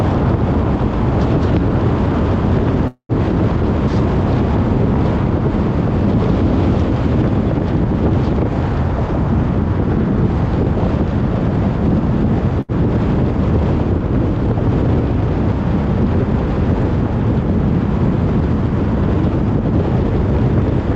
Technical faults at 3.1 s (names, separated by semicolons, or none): call audio freeze